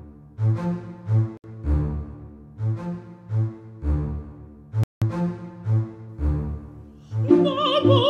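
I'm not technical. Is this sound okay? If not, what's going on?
No. Bluetooth stall at 1.37 s and 4.84 s: the music cuts out briefly, likely because the wireless headphones ran short of audio and waited for it.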